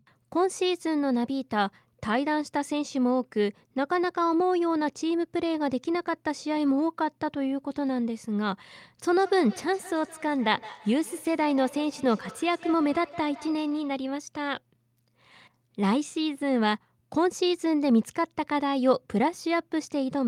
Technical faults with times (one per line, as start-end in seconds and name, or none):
9.16-14.06 feedback echo between two devices